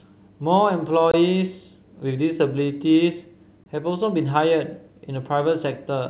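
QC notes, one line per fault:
1.11–1.14 s and 3.64–3.66 s, gap between chunks: two 23 ms silences, 2.5 s apart, where silence is left at each chunk join before the next chunk starts. No sound is lost, only delayed, so each break is a short hole in the speech.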